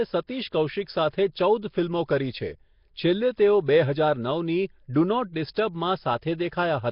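From start to finish the speech has most likely passed through Nellymoser compression, the Flash-era microphone codec, at a rate that fits roughly 22 kbps. Working in short fixed blocks with a tight bit budget, it starves the weaker bands and patches them with noise, so the damage here is heavy: a rough, hissy halo clings to the speech, everything sounds smeared and underwater, and nothing survives above 5.3 kHz.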